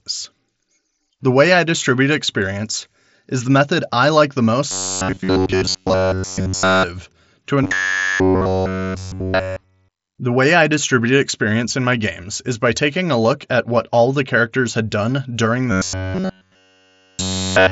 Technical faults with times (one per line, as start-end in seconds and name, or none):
4.71-6.83 robotic sound from repeated short buffers
7.64-10.18 robotic sound from repeated short buffers
15.72-17.71 robotic sound from repeated short buffers